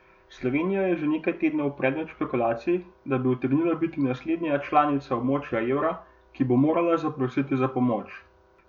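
Nothing in this stretch of speech goes wrong from a technical standpoint, so there's simply no fault to walk through here.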